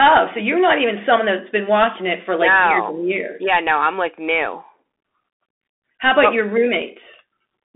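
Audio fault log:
Throughout, Bluetooth CVSD headset codec: the speech is boxed into a narrow telephone band, thin below about 250 Hz and cut off entirely above 3.8 kHz, with s sounds turned scratchy and a granular hiss running beneath everything. Distortion is plainly audible. The coding sends one bit per sample at 64 kHz, just a step up or down with an adapting step size, and when loud high-frequency sound moves faster than the step can follow, the waveform smears into that rough, gritty texture.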